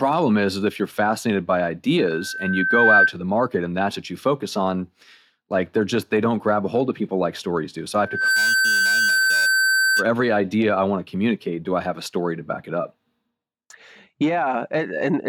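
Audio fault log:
1.99–3.13 s and 8.02–10.08 s, loudspeaker feedback squeal: a single 1.5 kHz tone swells above the speech, over about a second the first time and a fraction of a second the second, peaking roughly 10 dB then 5 dB louder. A steady interfering tone would hold its level, but this one grows by itself because the microphone keeps recirculating the loudspeaker's output at that frequency.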